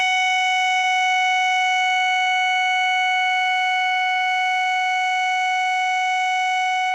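At 0.77 s a burst of packet loss interrupts the music for about 80 ms. The receiver extends the preceding sound for roughly 59 ms while fading it down, producing a held, fading continuation, then resumes about 60 ms further on, so that stretch of music is gone.

At 2.23 s, lasting about 50 ms, a short concealed packet loss fills a 20 ms hole with about 27 ms of synthesised continuation before blending back. Around 14 ms of the real signal is dropped, heard as a brief smear or wobble in the music.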